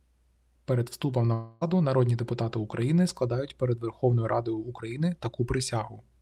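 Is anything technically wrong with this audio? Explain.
Yes. From 1.33 to 1.63 s the speech breaks off and a smeared continuation of the last sound fills the gap, fading as it goes. The fill runs about 0.28 s and no silence is left. Then speech resumes, but about 0.28 s of it is simply gone. This is likely a long network dropout. No audio arrived, and the receiver stretched the last sound to cover the hole rather than play the missing part.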